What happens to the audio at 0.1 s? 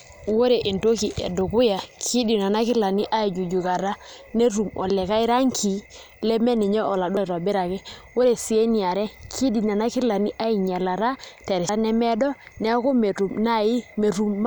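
At 0.1 s the speech plays through intact, with no dropout, click, distortion or other fault at that moment.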